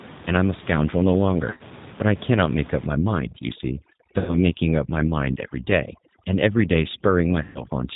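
Throughout, the speech has the slightly rough, synthetic texture and dull top of the G.729 codec, which fits an 8 kbit/s stream. Nothing above 4 kHz survives, and the roughness comes from pulse-based excitation. This separates it from a plain low-pass filter, which would muffle the sound without adding any grain.

At 1.50–1.63 s, 4.19–4.38 s and 7.43–7.64 s, VoIP packet loss concealed by the speech codec appears. The decoder extends its last pitch and filter into buzzy, fading tones, and the voice stays weak briefly afterwards. Unlike a plain dropout, there is no silence or click. The first event is broken into several short gaps.

From 2.85 s to the end, overdone noise removal strips the room noise, which sits about 19 dB below the speech, down to near silence with twinkling specks. That constant background behaviour sets it apart from codec warble.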